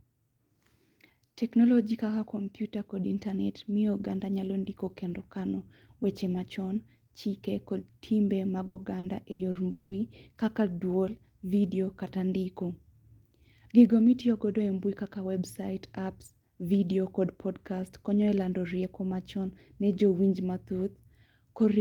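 Right after "timbe mag", from about 8.67 to 9.94 s, the speech breaks up with repeated packet loss (robotic sound). There are five holes in that stretch, the longest about 200 ms, and each is papered over by stretching out whatever sound came just before it. Roughly 440 ms gets filled that way, about a third of the span, so it comes across choppy, with chunks missing, until it clears at "kaka dwol vidio kata".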